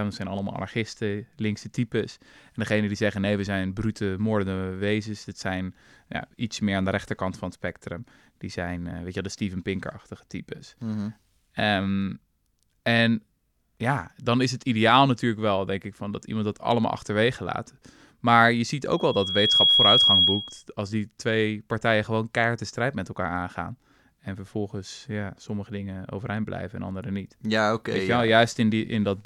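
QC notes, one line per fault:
18.91–20.63 s, loudspeaker feedback squeal: a piercing single tone at 3.3 kHz rises out of the speech, swelling to full strength in under a second and then sitting about 10 dB above the speech until it stops at 20.63 s. The microphone was picking up the loudspeaker it was feeding, and at 3.3 kHz the loop gain went above one, so that frequency kept reinforcing itself on each pass.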